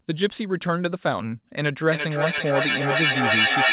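Feedback echo between two devices sets in at 1.81 s and runs to the end of the clip. A second device on the same call is playing this speech aloud, and the first microphone picks it up and sends it back. Because each echo canceller only removes its own device's playback, the sound returns about every third of a second, each pass thinner and more ringing. The repeats build instead of fading, peaking about 4 dB above the speech, all within a band that stops at 4 kHz, as a G.711 call would.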